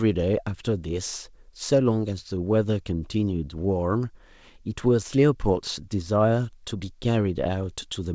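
No technical faults can be heard in this speech, which has passed through a call path whose content stops at 8 kHz, consistent with a wideband codec such as G.722 at 64 kbps.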